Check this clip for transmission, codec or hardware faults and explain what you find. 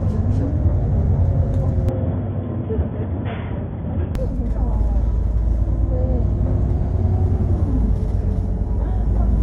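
One fault is present. From 1.89 to 4.15 s, the input likely switched to a poorer device. Everything above 3.5 kHz disappears, so the sound turns dull and boxy. It drops about 5 dB and gains a faint new noise floor. No gap marks either switch.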